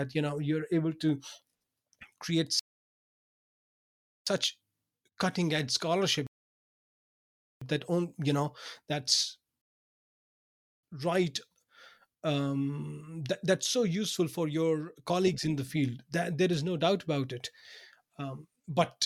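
Three rebuffering stalls occur, at 2.59 to 4.27 s, 6.27 to 7.61 s after "cutting edge", and 9.61 to 10.83 s after "on you know that's". Each time the player exhausts its downloaded audio, the speech drops to silence, then resumes exactly where it stopped, adding 1.67 s, 1.35 s and 1.22 s.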